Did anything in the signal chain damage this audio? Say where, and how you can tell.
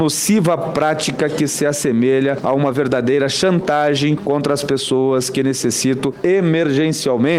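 No, nothing along the chain from capture to playback left an audible mark on this audio. There are no breaks, level jumps, tonal shifts or added noise anywhere in the sound that would point to damage at any stage.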